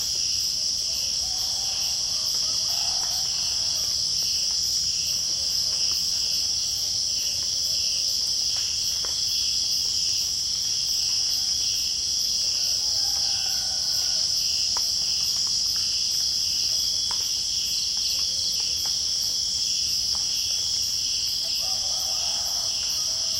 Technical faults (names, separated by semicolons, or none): compressed frames skipped